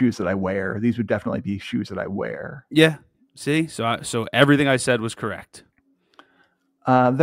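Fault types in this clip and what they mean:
No faults detected on this speech recording; nothing to list.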